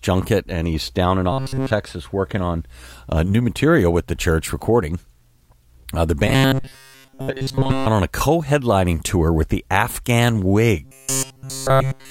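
From 1.32 to 1.71 s, 6.27 to 7.86 s and 10.85 s to the end, the sound turns into a rigid metallic buzz at 134 Hz: robotic sound, likely from a roughly 7.5 ms buffer being replayed over and over while fresh audio is skipped almost entirely.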